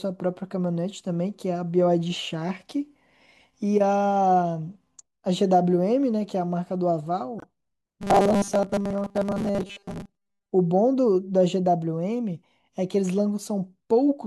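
A speech recording with two separate faults. From 7.39 to 7.44 s the sound drops abruptly into dead silence for about 56 ms, then resumes on time with nothing lost from the timeline. This is a corrupt frame muted: bit errors damaged the compressed data, the decoder rejected it, and the player filled the gap with silence. The length of the hole fits roughly two codec frames being discarded.

From 8.02 to 10.5 s the speech turns into a rigid, metallic buzz pitched at 200 Hz that still loosely tracks the syllables. This is robotic sound from repeated short buffers. New audio is likely arriving too slowly, so the playback software keeps looping the most recent 5 ms of sound to fill the wait while the real audio is skipped. Most of the material in that stretch is lost this way, and the fixed repeat period forces the steady 200 Hz tone over the speech.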